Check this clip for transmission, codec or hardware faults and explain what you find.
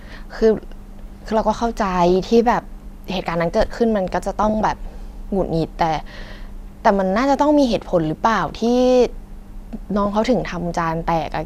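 The speech has DAB burbling in five short bursts: 2.09–2.37 s, 4.43–4.65 s, 6.17–6.35 s, 8.38–8.67 s and 10.03–10.27 s. Weak reception lets bit errors reach the MP2 data, so short blips of noise appear in single sub-bands. Each burst puts short noise blips over the speech.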